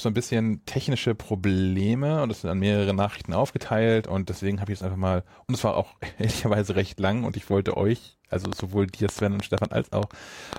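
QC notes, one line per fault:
8.45–10.57 s, train of clicks: Just after "und ich wollte euch", about ten sharp, same-shaped clicks tick over the speech at an uneven pace, near 4.7 per second. They peak about 15 dB above the speech. Likely interference or a faulty connection or power supply injecting repeated pulses.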